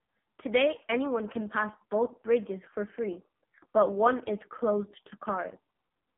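AMR narrowband mobile codec damage runs through the whole of this speech clip. The band is confined to roughly 150 Hz to 3.4 kHz, with nothing at all above 3.8 kHz, because the codec samples at 8 kHz. The heavy buzzy, synthetic quality comes from rebuilding the voice from a vocal-tract model excited by only a few pulses per subframe. That degree of coarseness points to one of the lowest AMR-NB modes, around 5 kbps.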